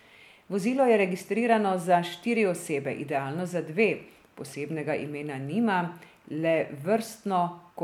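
Speech recording with no audible technical faults.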